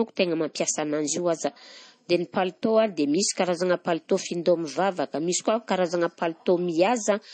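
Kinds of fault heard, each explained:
Low-bitrate audio saved at a high bitrate: the speech has nothing above about 8.3 kHz, a sharp ceiling that fits an MP3 first encoded at a low rate, around 32 kbit/s. The likely cause is that this was re-saved as a much larger MP3, which cannot bring back what was discarded. A plain low-bitrate file would sound the same; the giveaway is that the high-rate container carries a low-rate cut-off that a genuine high-bitrate encode would not impose.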